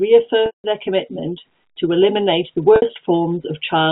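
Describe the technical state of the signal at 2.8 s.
Packet loss with pitch repetition, 2.76–2.82 s: the last pitch period repeats through the 60 ms gap as a held buzz fading down, not a clean silent dropout.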